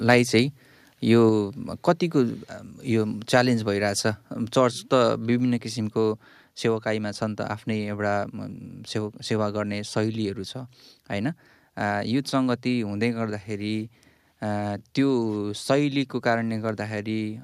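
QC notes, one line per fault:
0.10–0.14 s, microphone overload: input gain was likely set too high, driving peaks about 2 dB past the converter's limit, flattening a few percent of samples into harsh crackle.
1.29 s and 5.4 s, microphone volume stepped down: the call software likely cut the device's input gain in single steps, about 3 dB then about 2 dB, so voice and background drop abruptly.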